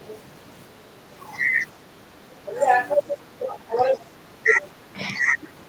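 From 0.00 to 0.18 s a faint second voice sits about 20 dB below the main speech, and it returns briefly from 4.59 to 4.68 s at about 25 dB down. This is the other side's voice leaking through, likely because a loudspeaker's output reached the microphone and the echo canceller left a residue. What marks it is an added, separate voice layered on top, not any change in the talker's own level.

The opposite problem, speech suppressed in double talk, appears as short dips in the talker's own voice at 1.82–1.91 s, 3.38–3.75 s, 3.92–4.05 s, 4.21–4.59 s and 4.76–5.52 s. The deepest drops are about 10 dB in the first, second and last stretches and about 5 dB in the other two. The likely cause is the canceller failing to separate near speech from echo while both sides talked, so it turned everything down. Nothing new is added here. The wanted voice simply sags or thins.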